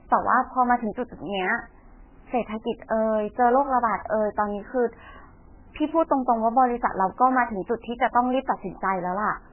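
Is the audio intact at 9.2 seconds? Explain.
No. At 9.2 seconds the speech carries MP3 compression damage, present through the whole clip. Nothing is heard above about 3.1 kHz, and weak detail flickers with a watery, swirly quality. That points to a likely very low bitrate, around 8 kbps.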